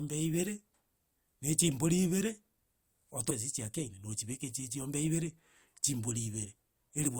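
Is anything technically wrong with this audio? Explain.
Yes. At 3.29 s the speech jumps abruptly forward with a brief blip, likely a stream segment skipped on loading, not a dropout, because there is no silent gap.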